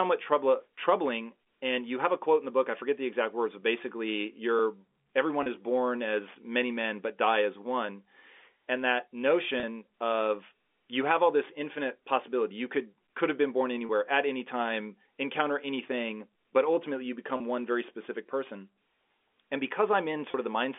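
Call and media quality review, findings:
Packet loss with pitch repetition: five short buzzy held blips, about 30 ms each, at 5.43, 9.60, 13.86, 17.37 and 20.31 s. Before "is born as many", "of you have all", "at any time encounter". Single lost packet, concealer repeating the last pitch period. Line's plain G.711 telephone band, 250 Hz to 3.5 kHz.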